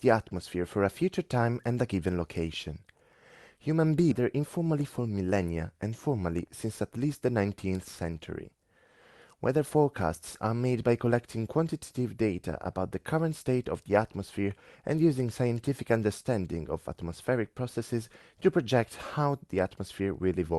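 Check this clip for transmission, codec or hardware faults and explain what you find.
Two faults show up close together in this speech.

At 4.11 s the speech lurches forward with no gap, joining the two sides directly. This is a skip ahead: about a second and a half of audio was dropped while later audio was already waiting.

From 4.21 to 5.28 s the speech sounds hurried at unchanged pitch, running at 109% speed. This jitter buffer speed-up trimmed short pitch-period pieces, about a tenth of a second in total, to cut the backlog.

The audio's upper limit near 12 kHz fits an Opus call path at around 32 kbps.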